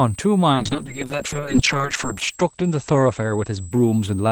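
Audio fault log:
Throughout, switching supply whistle: a thin, steady high whistle sits about 25 dB below the speech. Its pitch wanders between about 7.56 kHz and 8.41 kHz instead of holding one frequency. A switching power supply running in an audible burst mode, or beating against a second supply, produces this. As its load shifts, the switching rate moves, and the whistle's pitch moves with it.
0.53 s to 4.31 s, call bitrate drop: from 0.53 s to the end of the clip the speech turns coarse and watery and loses its top end. The audible bandwidth falls from 20 kHz to 8 kHz, which fits the encoder being pushed from about 64 kbps down to about 8 kbps after the link's bandwidth estimate fell. The roughest stretch lasts about 1.6 s. At such a low rate the codec spends too few bits per frame, smearing fine spectral detail, and it discards everything above 8 kHz. The bitrate does not recover before the clip ends.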